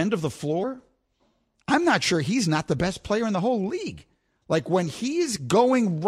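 At 0.62 to 0.64 s and again at 2.78 s, compressed frames are skipped: a couple of frames, then about one, never reach the output, so the speech jumps ahead by roughly 50 ms and then 20 ms, leaving an abrupt join at each point.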